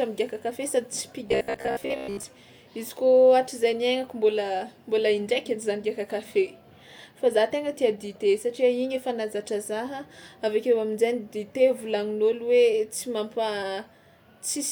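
From 1.27 to 2.25 s, just before "izy kôa", the speech turns into robotic sound from repeated short buffers. The voice becomes a rigid, metallic buzz fixed at about 66.7 Hz while still loosely tracking the words. That pitch points to a slice of roughly 15 ms being looped over most of this stretch, likely because fresh audio arrived too slowly and the gap was filled by repetition. Unlike codec warble, the pitch stays locked rather than wandering.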